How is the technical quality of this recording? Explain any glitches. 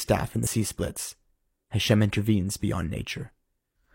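One glitch is audible in this speech recording, early on. From about 0.42 to 0.48 s there is damaged data in the compressed stream. A short run of the encoded bytes was corrupted, so the decoder misread those frames, lost sync and hunted for the next valid frame header. The result is a brief chirp, squawk, click or short hole lasting about 60 ms. On a spectrogram it shows as a narrow vertical disturbance that breaks the surrounding speech harmonics. The waveform has an abrupt discontinuity at each edge.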